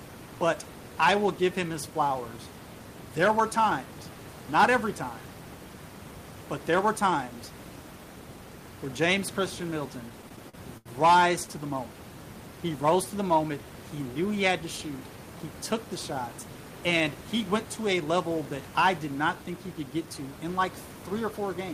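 Speech with room noise about 15 dB below the voice, and between 10.09 and 10.89 s packets arrived late, repeatedly draining the jitter buffer and producing repeated stalls (stutter). The receiver held the last sound through six short gaps of up to 80 ms, about 161 ms in all, so nothing is lost but the speech drags and hiccups.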